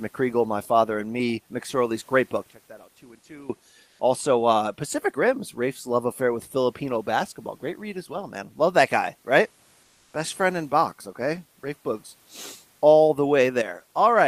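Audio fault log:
2.51–3.50 s, one channel inverted: just after "great book" the sound collapses by about 20 dB into a faint residue. One stereo channel has most likely flipped polarity, so everything common to both channels cancels when they are summed to mono. Unlike a dropout, the sound never goes silent. Only the channel difference remains, and full level returns abruptly at 3.50 s.
3.87–3.99 s and 9.83–10.13 s, comfort noise in place of the background: in these two pauses of 120 ms and 300 ms (the second right after "that guy right"), the room's natural background is swapped for a steady, featureless hiss. The likely cause is Opus discontinuous transmission, where the sender stops sending audio in pauses and the receiver fills the gap with synthesized noise. The fill is about 3 dB louder in the first gap and about 2 dB quieter in the second. What sets it apart from plain room noise is that the genuine background, sitting about 41 dB below the speech, keeps its texture, while the fill is uniform and shifts level at its edges.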